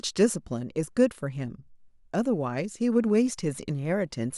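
A speech recording with no audible technical faults.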